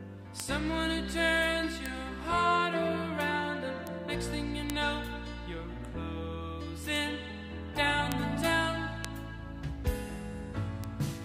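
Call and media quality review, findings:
Bit error spikes: eight isolated sharp ticks at 0.40, 1.86, 3.87, 4.70, 6.96, 8.12, 9.05 and 10.84 s, peaking around -11 dBFS, with some nearer -17 dBFS. Probable component: memory or digital link flipping a single bit, so the sample value jumps by a power of two and snaps back. Waveform: needle spikes only a sample or a few wide, unrelated to the surrounding signal. Spectrogram: thin full-band vertical lines.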